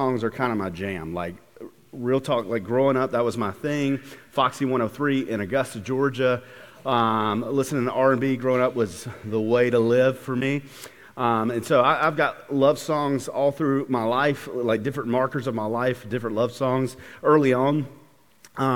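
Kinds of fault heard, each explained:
Nothing here calls for a line of its own: no glitches, dropouts or distortion turn up anywhere in this audio.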